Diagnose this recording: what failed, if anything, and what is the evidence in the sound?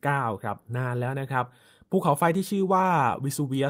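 Nothing failed here: listening along the whole speech recording, there's no point where the sound breaks, jumps or glitches, so there's nothing to trace back to any stage of the chain.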